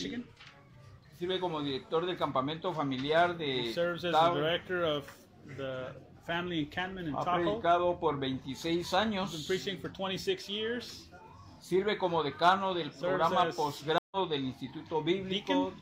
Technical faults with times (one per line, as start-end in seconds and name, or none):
13.98-14.17 stream reconnect